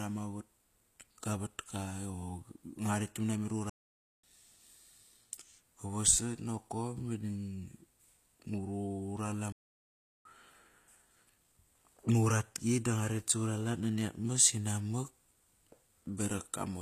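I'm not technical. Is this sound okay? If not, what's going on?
No. Throughout the clip there is HE-AAC compression damage, plainly audible in the speech. This is likely a low-quality streaming format that stores only the lower sounds and fakes the treble by copying it upward, so s sounds turn gritty or lispy.

Two playback stalls occur, from 3.69 to 4.24 s (about half a second) and from 9.52 to 10.25 s (about 0.73 s). The speech cuts to silence mid-flow, then resumes. The likely cause is the player running out of data briefly.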